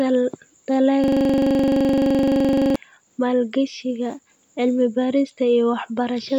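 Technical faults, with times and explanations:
1.04–2.76 s, system hang loop: a single 42.67 ms slice of the speech repeats exactly 40 times, producing a coarse, rattling buzz at 23.4 Hz until normal audio returns with "maalgashiga cilmi". The system stalled while the sound hardware kept replaying the same ring buffer, and the loop length fits a 2048-sample buffer. Unlike a skipping or concealed network stream, every cycle is identical and perfectly regular, with no fading or variation between repeats.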